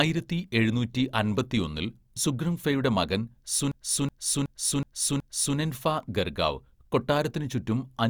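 A system hang loop runs from 3.72 s to 5.57 s in this speech, just before "ഗർഗാവ് കൊട്ടാരത്തിന് ചുറ്റും". The playback system stalled while the sound hardware kept replaying the same ring buffer. A 371.52 ms slice of speech repeats five times at about 2.69 Hz. That length fits a 16384-sample buffer at 44.1 kHz. Because the loop is long, it sounds like a skipping record. When normal playback resumes, essentially nothing is missing.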